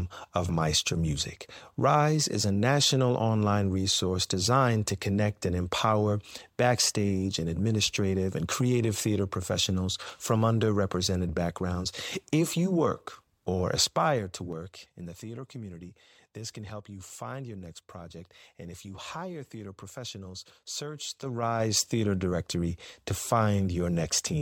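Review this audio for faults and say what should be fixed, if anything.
Zipper noise appears in two level moves in this speech. From 13.68 to 15.22 s the level drops by roughly 15 dB in 3 dB steps, about three a second. From 21.0 to 21.78 s it rises by a similar amount, faster, at about five steps a second. Each jump lands without smoothing, so a small click marks every step. Unlike random clicks, these tick in an even rhythm only while the level is moving, and they stop once it settles. To prevent it, ramp the gain per sample or interpolate it across each buffer instead of jumping in whole steps.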